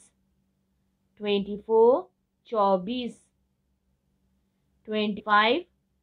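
At 5.18 to 5.21 s, compressed frames are skipped. A short run of encoded frames never reaches the output. The audio jumps forward by about a tenth of a second, which fits roughly five missing frames.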